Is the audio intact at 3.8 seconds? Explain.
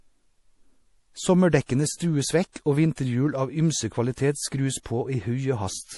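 No. At 3.8 seconds, as throughout the clip, the speech carries plainly audible damage, likely from MP3 compression at a low bitrate around 48 kbps. Starved of bits, the encoder drops everything above 11.5 kHz and lets weak frequency lines flicker, giving a watery, swirly tone. A spectrogram shows a hard ceiling at 11.5 kHz and patchy, blocky holes below it.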